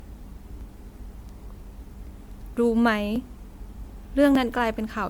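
Speech with a swirly, smeared and hollow character across its whole length, with softened attacks. The likely cause is generation loss, from decoding and re-encoding roughly seven times, which fits an MP3 chain at 128 kbit/s. Each pass adds noise and spectral holes, and nothing remains above 20.1 kHz. Small jumps in the sound occur at 0.61, 3.16 and 4.35 s. Each is likely a dropped buffer (overrun), where a few milliseconds were overwritten before collection and the two sides were joined without any silence.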